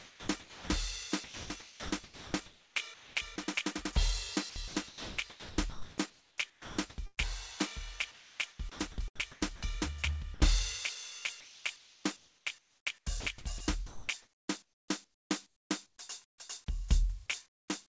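The music breaks up repeatedly from 0.0 to 0.7 s, 1.24 to 3.38 s, 4.5 to 7.19 s, 8.11 to 9.75 s and 11.4 to 16.38 s. Passages drop into a flat hiss and return. The gaps total about 0.58 s, 1.42 s, 1.76 s, 0.7 s and 2.76 s across those stretches. This is sound chopped by the voice detector, likely because the sender's detector kept mistaking quieter musical passages for background and switching transmission off and on.

At 10.34 to 10.40 s, a 60 ms sliver of music vanishes under steady noise before the sound resumes. This is sound dropped by the voice detector, likely a brief misjudgement that stopped sending and let the receiver fill in comfort noise.

From 17.46 to 17.68 s, the background turns smooth and featureless and drops by about 21 dB. That background already sat about 35 dB below the loud parts. This is comfort noise in place of the background, likely generated during a transmission pause. 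Nothing above 8 kHz is present throughout, which fits a wideband codec such as G.722.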